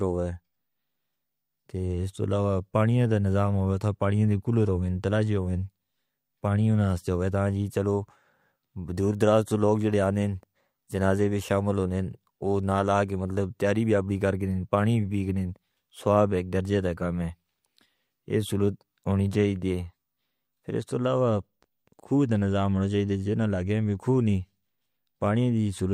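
No technical faults can be heard anywhere in this speech recording. Nothing in the audio breaks off, repeats or jumps at any point.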